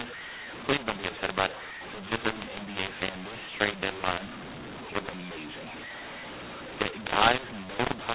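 From start to finish, audio coded as G.711 A-law is decoded as mu-law, a mix-up of the two laws. Each 8-bit code maps to the wrong level, so speech levels are scrambled, some too loud and others too quiet, and the quietest samples rise above silence, filling pauses with noise.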